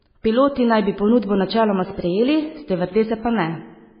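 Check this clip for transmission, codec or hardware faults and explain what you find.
One fault runs through the whole recording: MP3 compression, applied hard. From start to finish the speech sounds watery and swirly, with heavy codec damage and nothing above about 5.1 kHz, so it is dull and muffled. The likely cause is an MP3 encoder starved of bits, which fits a very low bitrate of roughly 16 kbps. It discards weak frequency lines that then flicker on and off between frames, and it cuts the treble at a fixed point, which produces the hard ceiling near 5.1 kHz.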